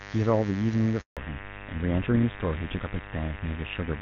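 A mains buzz runs through the whole recording, about 15 dB below the speech. Sharp switching spikes twice per 50 Hz cycle produce a raspy, steady drone. On a spectrogram it appears as evenly spaced horizontal lines at 50 Hz multiples reaching into the kilohertz range.

From 1.01 to 1.17 s there is a handover gap. The call switched networks and no speech frames arrived for 160 ms. The sound fades within a few tens of milliseconds into silence. The waveform shows a flat stretch, and the spectrogram shows a blank vertical band, with only the buzz's harmonic lines surviving if they were added after the network path.

From 1.17 s to the end, the call falls back to narrowband. The clear HD Voice sound, which fits a high-rate AMR-WB mode, gives way to a duller, rougher quality that points to GSM full rate. On a spectrogram all energy above 4 kHz abruptly disappears, leaving a hard ceiling.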